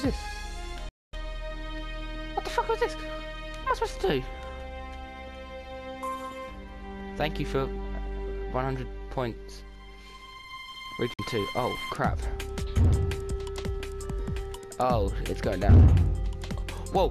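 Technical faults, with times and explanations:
0.89–1.14 s, digital broadcast dropout: the sound snaps to silence with a very quick fade of about 3 ms and stays gone for roughly 240 ms before coming back mid-stream. The receiver muted while frames were bad or missing, which fits about ten frames of 24 ms each, so whatever played in that gap is simply lost.
11.14–11.19 s, digital broadcast dropout: a much shorter hole of about 48 ms with the same 3 ms fade, consistent with just a couple of frames failing before good data returned.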